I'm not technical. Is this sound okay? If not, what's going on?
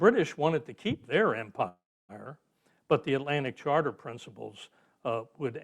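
No. From 1.68 to 2.12 s there's a call audio freeze: the sound stalls, fades to silence, then picks up where it stopped, likely from delayed network data.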